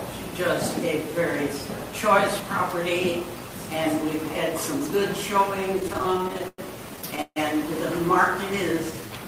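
Two bursts of repeated stalls (stutter) hit at 5.75–6.60 s and 6.96–7.38 s: packets arrived late, the jitter buffer kept running dry, and the receiver stretched the last sound to cover it, with the longest hold about 150 ms in the second burst. Then there's a jitter buffer slow-down at 8.75–9.25 s, where the audio plays at about 88% speed at the same pitch, adding roughly 70 ms as the buffer rebuilds its reserve.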